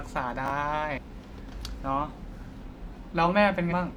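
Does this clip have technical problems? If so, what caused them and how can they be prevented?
Yes. There are two kinds of fault in this speech clip.

Chunks out of order occur between 0.46 and 0.50 s. A 20 ms piece of audio was delivered one chunk late, so it plays after the chunk that should follow it. Nothing is missing, but the sequence is swapped. That leaves three hard joins in a 40 ms span, heard as a brief jumbled flutter. Sequence numbers checked before writing or playback would keep chunks in order.

Damaged data in a compressed stream appears twice, at 0.93 to 0.99 s and at 3.67 to 3.73 s. Each lasts about 55 ms. Corrupted bytes in the encoded stream make the decoder misread those frames. It loses sync and hunts for the next valid frame header. The result is a short glitch. Checksums on the transport, plus keeping metadata out of the audio payload, would stop this corruption.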